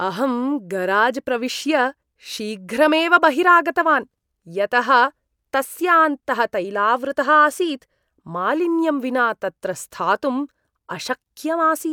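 Nothing here needs flagging on the technical side, since the speech just rolls along with no faults to point to.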